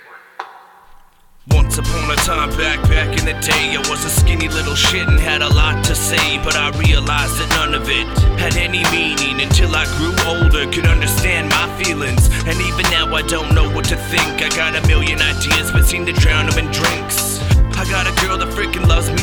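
No technical faults can be heard anywhere in the audio.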